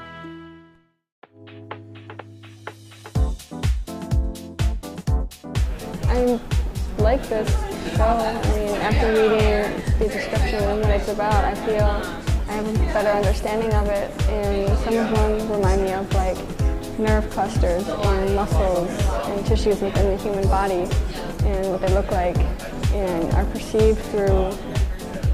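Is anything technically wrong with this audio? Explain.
Yes. From 18.61 to 23.81 s there is a call bitrate drop. The bandwidth estimate fell, so the encoder coded far more coarsely, consistent with a fall from roughly 128 kbps to about 27 kbps, with the lowest point lasting about 2.4 s. The top end goes muffled and the sound turns rough. Unlike packet loss, it stays continuous, with no gaps or clicks.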